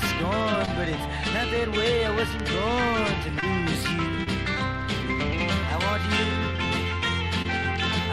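Short concealed packet loss at 0.65, 3.40, 4.24 and 7.42 s: about 20 ms of audio each time is missing, then extrapolated and cross-faded back in, leaving a brief smear or wobble.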